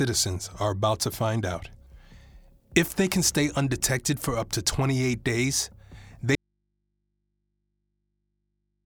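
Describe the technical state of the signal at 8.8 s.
An audio dropout to a faint residue runs from 6.35 s to the end, covering 8.8 s. The wanted signal cuts off abruptly, likely lost upstream while the path stayed live, leaving only mains hum about 50 dB below the normal level.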